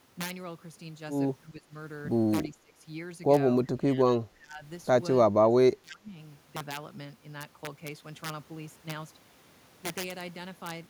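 Integer overflow runs throughout: loud speech peaks are driven about 7 dB past full scale, and instead of being limited they wrap to the opposite sign. A small fraction of samples, well under one percent, snap across the full range as harsh cracks. The waveform shows spikes flipping from top to bottom, with vertical broadband streaks on the spectrogram.

Speech suppressed in double talk appears at 1.43–1.74 s, 2.51–2.87 s, 3.63–4.06 s, 4.23–4.64 s and 5.25–6.19 s. The speech dips by roughly 15 to 20 dB and drops in and out, most likely because an echo canceller mistook far-end overlap for echo. On the waveform these are sudden envelope sags, and on the spectrogram they are faded, patchy bands.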